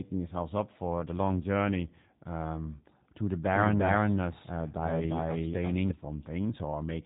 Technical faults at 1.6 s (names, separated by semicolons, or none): G.729 codec